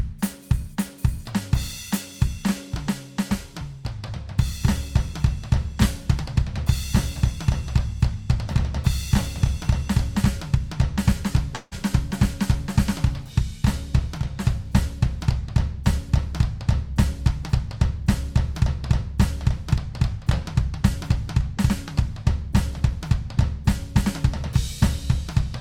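At 11.55 s the music smears into a fading buzz for about 160 ms, briefly silences, then resumes at 11.74 s with material skipped, likely a long network dropout rather than a momentary glitch.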